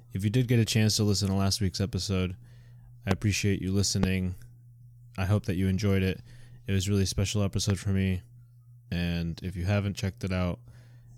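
A speech recording marred by three loud pops, at 3.11–3.13 s, 4.03–4.06 s and 7.70–7.72 s, each a single sharp thump jumping roughly 15 dB, 15 dB and 10 dB above the speech, which carries on underneath. The likely cause is an electrical transient such as a plug, switch or static discharge. On a waveform each pop is a tall, narrow spike; on a spectrogram, a thin vertical stripe spanning all frequencies.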